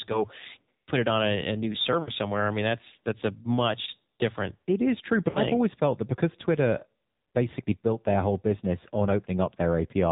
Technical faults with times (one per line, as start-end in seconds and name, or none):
0.00-10.12 AMR narrowband mobile codec
2.02-2.11 lost AMR speech frames
5.30-5.39 lost AMR speech frames